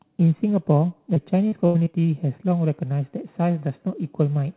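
From 1.14 to 1.96 s the speech turns choppy and robotic, with five short holes, the longest 83 ms. This is repeated packet loss: about 180 ms went missing, and each hole was patched by stretching the previous sound, covering roughly a fifth of that stretch, over a call path band-limited to 4 kHz.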